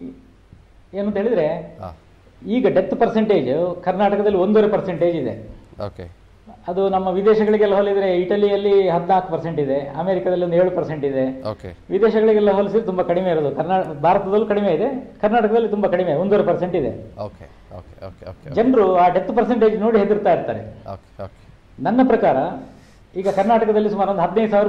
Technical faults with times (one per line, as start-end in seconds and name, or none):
none